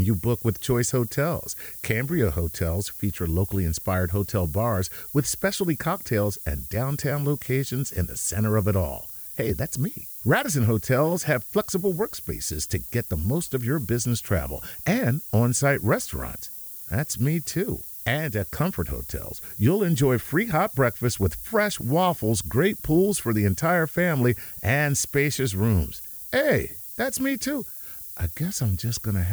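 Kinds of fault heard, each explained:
Low bit depth with noise shaping: The speech has been quantised to very coarse steps, consistent with about 6 bits, and the rounding error has been fed back so that the noise is pushed out of the lower range and up toward the top of the band. Throughout the clip this is heard as a steady, thin hiss that grows strongly brighter at high frequencies. The hiss sits only about 10 dB below the speech.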